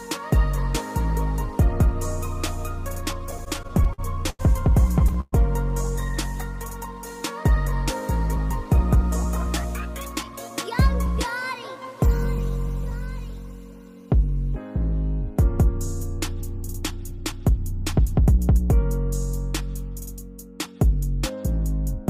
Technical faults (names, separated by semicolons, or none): repeated stalls (stutter); jitter buffer speed-up